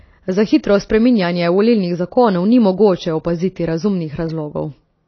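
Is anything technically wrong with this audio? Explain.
Yes. Throughout the speech there is plainly audible compression damage, likely from AAC compression. Nothing is present above 6.5 kHz, so the top octave is missing and the speech sounds dull and boxed in. The codec works on frames of frequency lines, spending bits only where a hearing model says they matter. When starved of bits, it drops the high band entirely and quantises the rest coarsely. The result is smeared, warbling sustained sounds and thin, fizzy sibilants, which fits a low bitrate in the region of 24 kbps.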